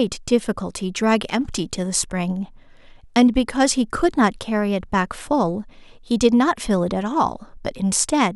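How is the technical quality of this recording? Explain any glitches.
Nothing stood out as a glitch or technical problem on listening to this speech recording.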